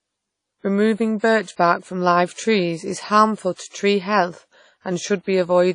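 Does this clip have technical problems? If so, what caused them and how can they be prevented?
Yes. The speech carries plainly audible WMA compression artefacts from start to finish, most likely from encoding with that codec at a low bitrate, which fits a setting around 32 kbps. The transform coder spreads its quantisation noise over long blocks, so the sound rings and turns washy, with a hiss that rises and falls with the speech. On a spectrogram nothing appears above 10.1 kHz, a hard ceiling, and weak detail below it shows as blotchy, missing patches between stronger harmonics. Keeping an uncompressed or lossless master and encoding at a higher bitrate, or with a more modern codec, would prevent this.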